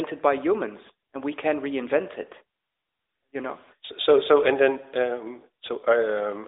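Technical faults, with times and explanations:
No technical faults are present in this speech clip. The audio carries the band-limited sound of an AMR narrowband mobile codec path at about 12.2 kbps, with the line band running from roughly 300 Hz to 3.7 kHz, nothing above 3.8 kHz, and only light codec colouring.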